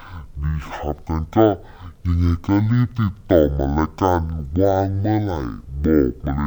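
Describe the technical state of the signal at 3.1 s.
At 3.1 s the speech is dragged out at half speed and sits a full octave low, as it does from start to finish. This is stereo read as mono: interleaved left and right samples are played back in sequence as one channel, doubling the duration.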